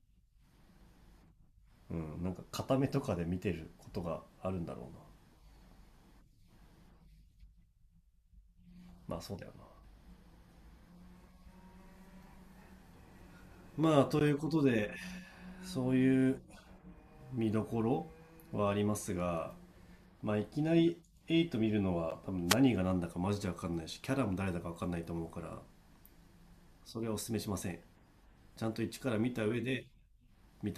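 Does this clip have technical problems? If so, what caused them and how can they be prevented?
Yes. Two short ticks occur, at 14.19 s and 22.10 s, each a brief tick or dip in the speech. These are blocks of digital silence of about 15 ms and 12 ms. A run of samples dropped straight to zero and then resumed, with no fade either way. That points to the output buffer not being filled in time. A larger buffer and a less loaded processing chain would prevent these dropouts.

From 22.46 s to 22.57 s, about 0.11 s, a brief swish of static rises over the voice. This is a wireless microphone noise hit. The FM radio link from the microphone faded as reflected signals partly cancelled the direct one, so receiver noise came up for that moment. Better antenna placement with clear line of sight, or a diversity receiver, would prevent such fades.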